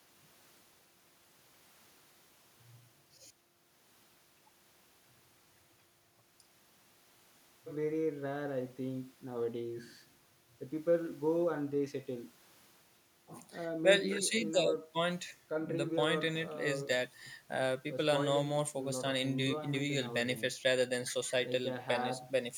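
No technical faults can be heard anywhere in the recording. Nothing in it calls for a time stamp or a description.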